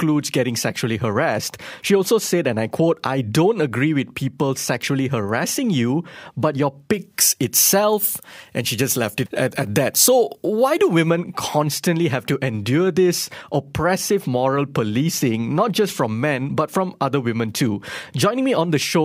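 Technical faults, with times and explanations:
6.93–11.10 s, pre-emphasis left on: the treble boost of a 50 µs FM emphasis curve is present without the matching de-emphasis, so high frequencies sit about 11 dB above 1 kHz at 10 kHz. The speech turns thin, bright and hissy, with sibilants sharply exaggerated. A spectrogram shows the band above a few kHz clearly brighter for this span only, and the waveform looks spikier, with more fine high-frequency detail riding on each syllable.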